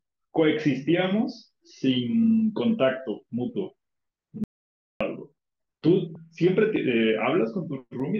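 At 4.44 s the speech cuts out abruptly and returns at 5.01 s. This is an audio dropout to silence lasting about 0.57 s. The gap is silent, with no room tone. The likely cause is lost input while recording continued.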